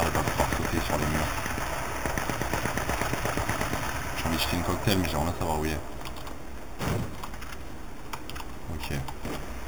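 Throughout, imaging from sample-and-hold upsampling: samples repeated from 8 kHz to 48 kHz add a metallic fizz, about 13 dB down, visible as a mirrored 4 to 8 kHz band.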